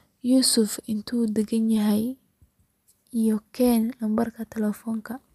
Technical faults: none

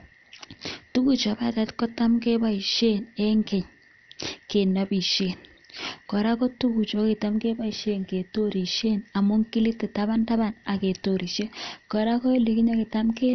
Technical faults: MP2 compression

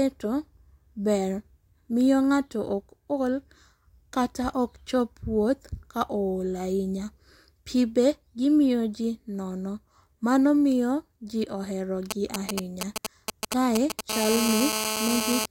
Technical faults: GSM signalling bursts; GSM phone buzz

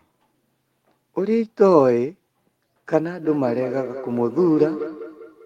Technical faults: feedback echo between two devices

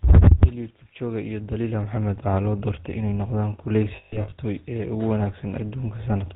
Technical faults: GSM full-rate codec; lost GSM frames

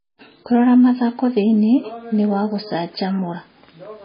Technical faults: MP3 compression

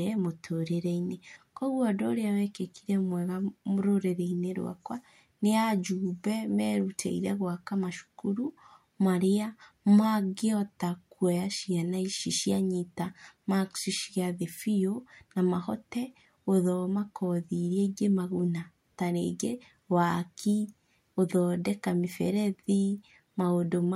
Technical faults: none

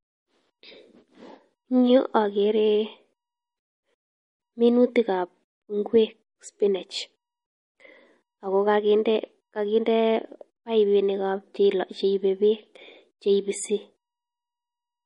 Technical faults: MP3 compression

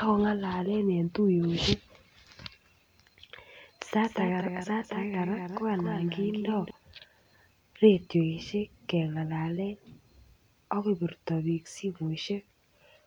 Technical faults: doubled audio track

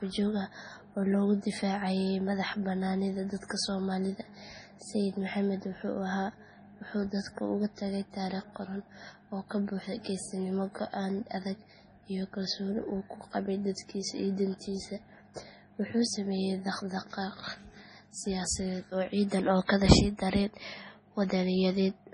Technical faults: MP3 compression; pre-echo

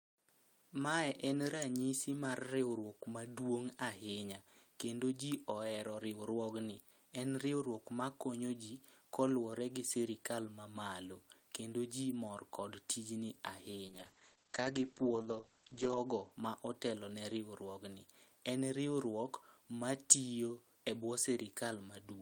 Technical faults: call bitrate drop

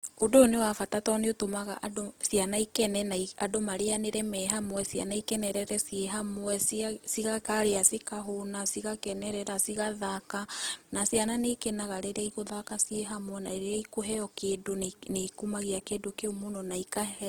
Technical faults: Opus compression

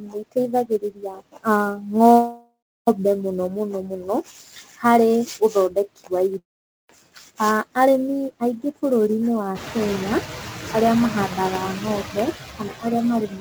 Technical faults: noise suppressor artifacts; sample clock jitter; speech cut by the noise suppressor; call audio freeze; long network dropout

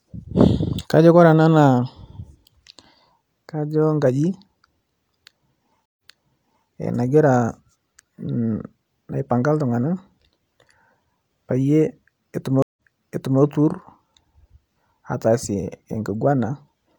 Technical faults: stream reconnect

